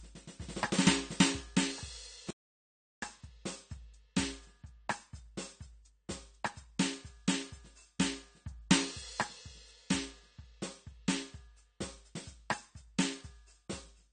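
From the first bar to the last, the music carries AAC compression artefacts that are plainly audible: nothing reaches above 9 kHz, so the top end is dull, and sustained tones warble and smear and turn fizzy. This likely comes from AAC-LC coding at a low bitrate, around 32 kbps, which drops high frequencies and thins the rest. Unlike a simple low-pass filter, the damage shifts over time and sounds hollow and swirly rather than just muffled.

At 2.31 s the sound drops out to total silence and returns at 3.02 s, a gap of about 0.72 s. This audio dropout to silence is likely the input being lost while the recorder kept writing silence. It differs from a volume dip or a gate closing because there is no room tone or tail in the gap, only silence. The music stops abruptly and resumes mid-phrase, and whatever was playing in between is gone.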